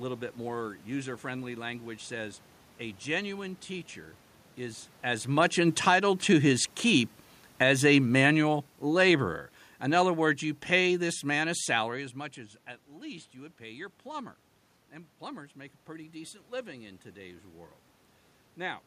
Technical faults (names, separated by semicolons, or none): automatic gain falling; automatic gain rising